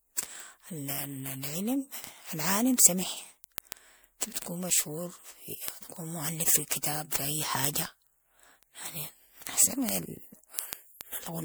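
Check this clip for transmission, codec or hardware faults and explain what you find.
Two faults are present in this speech.

Generation loss runs throughout: a swirly, hollow, smeared tone with blurred attacks, worse than one MP3 pass near 128 kbit/s would give. It is likely repeated re-encoding, several times over. Unlike single-pass coding, the artefacts pile up.

Word clock ticks run from 0.22 s to 11.43 s: sharp ticks of uneven strength at a steady rate of about one every 0.15 s, around seventy in all. A receiver on an unlocked clock, off by roughly 150 ppm, drops or repeats a sample at each slip. The strict regularity sets them apart from random clicks.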